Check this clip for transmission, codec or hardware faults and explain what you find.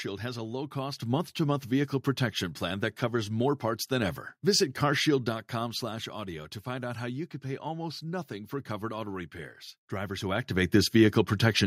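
The speech and the room behind it jump louder together in a single instant, twice: about 7 dB at 1.02 s, then about 2 dB at 4.02 s, just after "covers more parts than". This is the microphone volume stepped up. The call software judged the input too quiet and raised the device's input gain in one step. Because the change happens before any processing, voice and background rise as one, with no fade.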